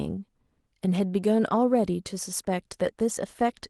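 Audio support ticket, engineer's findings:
Clock drift between sender and receiver across the whole clip. Sender clock runs slow, about one and a half percent. Jitter buffer keeps draining toward empty.

Repeated timing corrections, 0.15 s to 3.61 s. Receiver repeats short pieces to stay fed. Playback at 99% speed, roughly 50 ms added. Faint uneven hiccups through Opus call path at 12 kHz bandwidth.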